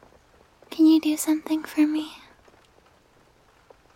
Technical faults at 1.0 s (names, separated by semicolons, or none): none